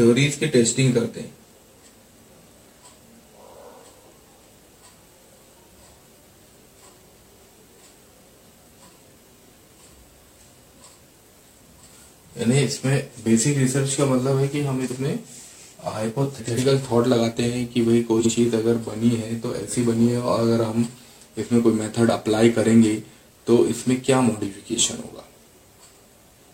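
Frames out of order occur at 14.85 to 14.96, 16.37 to 16.59 and 18.19 to 18.32 seconds. Adjacent blocks of about 46 ms (93 ms at 16.37) swap places. Each produces a brief garbled flutter. No time is lost.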